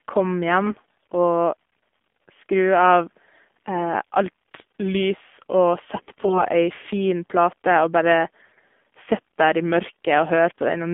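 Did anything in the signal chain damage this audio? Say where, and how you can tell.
Yes. At the codec stage, the whole clip is band-limited to about 200 Hz to 3.5 kHz, and the speech sounds plainly buzzy and synthetic. That points to the AMR narrowband mobile codec at a low mode, fitting about 7.4 kbps, where sparse excitation pulses leave little fine detail.

On the network link, AMR bit errors appear at 0.64–1.12 s, 5.96–6.42 s and 8.42–8.63 s. Pitch and level hold, but the voice turns hoarse, scratchy and gargly, heaviest in the middle burst. Flipped weakly protected bits misplace excitation pulses and skew gain and spectral values, while the frames still pass their checks.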